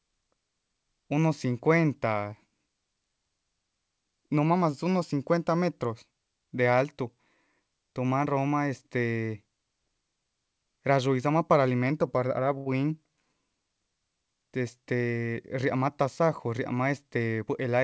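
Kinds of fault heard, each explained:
Short stall from a late packet: At 12.58 s a packet arrived late and the jitter buffer ran dry. The receiver stretched the last sound for 80 ms until it came. Nothing is lost, but the sound hangs on too long and the delay grows by 80 ms.
Jitter buffer speed-up: From 15.27 to 16.59 s the buffer held more audio than it aims for. The receiver cut many short pitch-period pieces, about a tenth of a second in all. Speech runs 6 percent fast at unchanged pitch and sounds slightly hurried.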